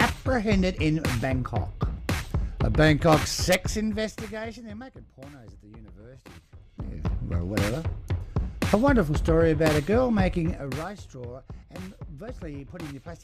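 Zipper noise at 3.46–4.95 s, 6.44–7.13 s and 10.50–10.97 s: the level drops about 20 dB, climbs back about 20 dB, then drops about 15 dB in unsmoothed 1 dB steps, around twenty a second, so a fast ticking rides on the sound.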